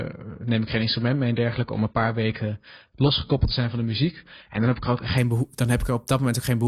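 From the very start up to about 5.18 s, the speech sounds dull and a bit smeared, with nothing above 5 kHz and the codec's swirly artefacts right up front. That's an adaptive stream starting at a low bitrate: the player grabbed a cheap version to get going fast, something like 16 kbit/s AAC by the sound of it, then jumped to a richer one, around 96 kbit/s, once it trusted the connection. The switch is abrupt, but there's no gap.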